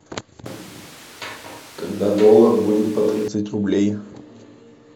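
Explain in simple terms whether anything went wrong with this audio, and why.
From 0.46 s to 3.28 s the voice suddenly turns roomy and hollow, with thinner bass and more background noise, though about as loud. It then snaps back. This is a switch to a distant microphone, likely because the close microphone dropped out.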